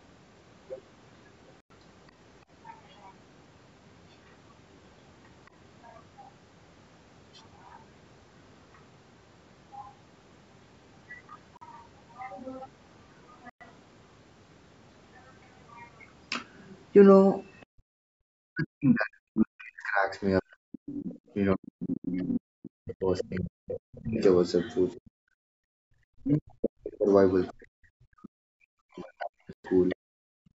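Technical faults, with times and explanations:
1.60–1.72, 11.57–11.63, 13.50–13.62, 22.94–23.02 and 29.53–29.66 s, Bluetooth stall: likely delayed wireless packets emptied the headphone buffer, so the sound cuts to silence for 98, 43, 111, 64 and 113 ms.
5.46–5.50, 8.74–8.78 and 17.61–17.65 s, other side's voice leaking through: the echo canceller likely missed loudspeaker sound reaching the microphone, leaving brief scraps of a second voice about 40 dB down.
20.94–29.96 s, other side's voice leaking through: the echo canceller likely failed to remove the loudspeaker playback, so a second voice comes through over a longer stretch, only about 15 dB below the main speech.
17.66–18.23, 25.48–25.86 and 29.96–30.59 s, background gated by the echo canceller: the canceller clamped the microphone during loudspeaker playback, so room sound drops by about 37, 40 and 39 dB.
18.51–29.96 s, speech suppressed in double talk: with both sides talking, the canceller likely could not separate the local talker from echo and pulled the speech down by about 40 dB for roughly 7 s in total.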